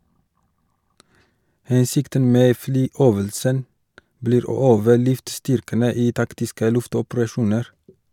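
Nothing stood out as a technical problem on listening to this speech recording.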